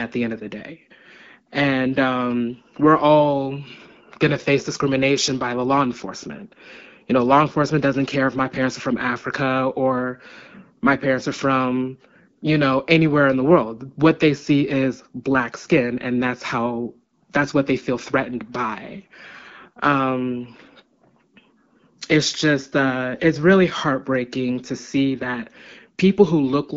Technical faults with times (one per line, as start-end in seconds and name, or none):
none